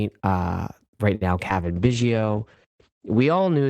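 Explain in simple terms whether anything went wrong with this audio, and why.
Three separate problems show up, all starting close together in the first half of the clip.

At 1.15 to 1.23 s, right after "uh right", there's a short stall from a late packet. A piece of audio arrived late, so the receiver ran out of sound and stretched the last bit for about 56 ms until the piece showed up. Nothing is lost, but that moment hangs a touch too long and can pick up a faint buzzy quality before the speech moves on.

A moment later, at 1.49 to 1.51 s, just after "uh right now", comes a short concealed packet loss. This time about 20 ms of audio never made it. The receiver patched the gap by continuing the sound it had just played, then blended back into the real audio. It's quick, more a tiny smear or wobble than a gap, and anything very short spoken right there may simply disappear.

From 1.61 s to the end, still following "uh right now", there's a call bitrate drop. 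The connection apparently looked squeezed, so the encoder switched to a much cheaper, coarser way of coding the sound and dropped everything above about 8 kHz. From that point the speech sounds duller and more muffled, with a rough, watery edge, and it stays at its worst for roughly the last 1.6 seconds.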